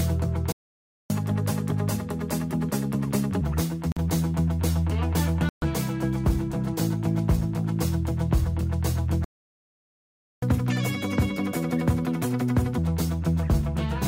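At 0.52 s the sound halts for 0.58 s, until 1.10 s, and then resumes. It is a playback stall, most likely the player's buffer running empty or its thread being blocked. The break is long and is followed by sped-up audio, which separates it from a brief dropout.

From 1.10 to 3.41 s comes the catch-up at higher speed. The player works through its backlog at 1.25 times normal speed, so the pitch rises by roughly four semitones.

Short silences follow from 3.92 to 3.98 s (47 ms) and from 5.49 to 5.63 s (132 ms). These are likely Bluetooth stalls, where delayed wireless packets leave the headphone buffer empty. They are much shorter than the playback stalls, and no speed-up follows them.

A second playback stall runs from 9.24 to 10.43 s, 1.18 s of silence. Its likely cause is again the player starving or being blocked. This second catch-up runs from 10.43 to 12.78 s at 1.5 times speed, which lifts the pitch by about seven semitones, a stronger jump than the first one.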